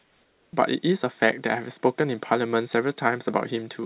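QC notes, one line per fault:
0.00–0.53 s, comfort noise in place of the background: the opening pause holds a smooth, featureless hiss, about 3 dB quieter than the true room tone and lacking its detail. The sender likely stopped transmitting during silence, leaving the receiver to synthesise stand-in noise.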